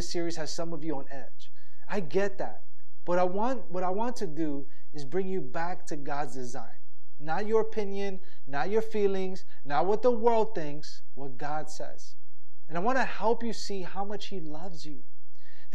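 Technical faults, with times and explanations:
Throughout, DC offset: the whole speech waveform sits shifted off zero by a constant of about -20 dBFS. You won't hear it as such, but it eats headroom on one side and shows up as a steady lump of energy right at 0 Hz.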